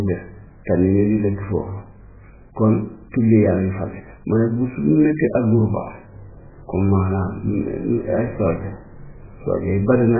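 A speech recording carries heavy MP3 compression damage for its whole length. Nothing is heard above 2.5 kHz, so the treble is simply gone and the voice sounds dull and boxed in. Weak frequency lines drop in and out from frame to frame. That gives a watery, swirling texture, and s sounds turn metallic. Damage this severe points to a very starved bitrate, around 8 kbps. The likely cause is an encoder cutting the band and discarding detail to fit.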